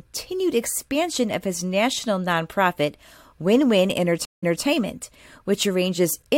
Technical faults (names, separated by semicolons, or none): stream reconnect